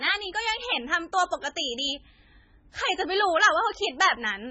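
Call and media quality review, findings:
MP3 compression, throughout, likely cause. Speech sounds watery and swirly, heavily damaged. No content above 8 kHz. Treble cut fixed; weak bands flicker frame to frame. Attacks smeared. Damage this heavy fits a bitrate near 16 kbps.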